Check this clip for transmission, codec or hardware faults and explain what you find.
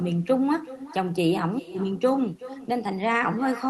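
One fault runs through the whole clip: echo with no canceller. Every stretch of speech returns roughly 0.4 s later, about 16 dB quieter. The far end's loudspeaker feeds its microphone, and nothing strips that out. The copy sounds thin.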